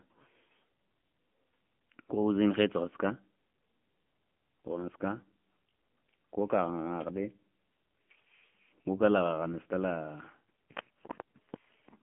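From start to finish the speech carries AMR narrowband mobile codec damage, and it is heavy. The signal is confined to a telephone band of roughly 150 Hz to 3.4 kHz, with nothing above 3.5 kHz, so sibilants lose their hiss and the low body is thin. The codec rebuilds each 20 ms frame from a vocal-tract model and a sparse pulse excitation. Here that leaves the voice buzzy and synthetic, which points to one of the low AMR-NB modes, around 6.7 kbps.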